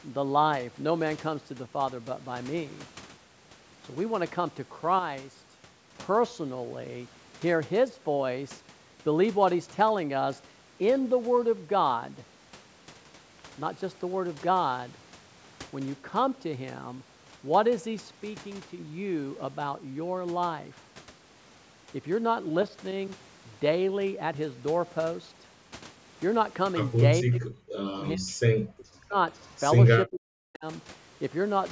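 From 4.99 to 5.59 s, the speech abruptly drops by 6 dB and then returns. This is one channel dropping out, likely from one stereo side going silent before the mono sum. Only the shared signal remains, at half level.

From 27.21 to 28.42 s, 28.67 to 29.16 s and 30.06 to 30.65 s, the speech dips deeply, by around 40 dB. This is speech suppressed in double talk. The echo canceller likely could not tell this talker from the far end's echo. So it turned both down.

At 29.35 s, a very faint, short scrap of speech comes back about 0.49 s late, lasting to 29.5 s. This is echo leak. The far side's loudspeaker sound likely slipped past its echo canceller and was sent back.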